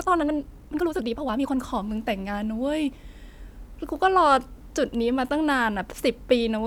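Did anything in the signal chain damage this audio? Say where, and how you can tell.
Yes. The first 1.58 s is a time-stretched section. The speech runs at about 1.89 times normal pace but keeps its natural pitch, so it sounds rushed, then settles abruptly into normal timing. That mismatch between pace and pitch is the tell. Most likely, a software step after capture squeezed the opening to fit a length and kept the pitch by cutting short slices out of the audio rather than resampling it.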